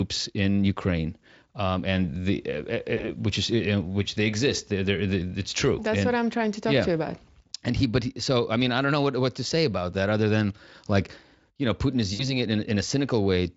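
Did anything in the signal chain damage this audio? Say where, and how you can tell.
Yes, VoIP packet loss concealed by the speech codec, at the network stage, around 2.97 to 3.12 s, 7.25 to 7.29 s and 12.13 to 12.37 s. At each point the speech smears into a buzzy tone or coloured noise that fades as the decoder stretches its last pitch and filter with falling gain. The first two gaps fit a single lost 20 ms frame, and the last fits about 60 ms. The voice stays weak afterwards because each rebuilt frame depends on the one before, even though the Speex coding around these points sounds clean.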